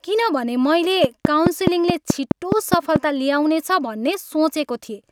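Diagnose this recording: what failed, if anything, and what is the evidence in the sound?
A train of clicks runs from 1.04 s to 2.97 s. About ten sharp ticks arrive at a steady 4.7 per second. They sit well above the speech, peaking about 20 dB over it, and carry on through the gaps between phrases. Each click has much the same shape. That regular, repeating pulse likely comes from interference picked up in the analogue wiring or from a faulty connection or power supply.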